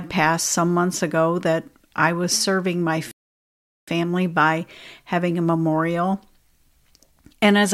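Speech with a rebuffering stall from 3.11 to 3.88 s: playback starved of data goes silent for 0.76 s, then resumes exactly where it stopped. Unlike a dropout, nothing is skipped; time is only added.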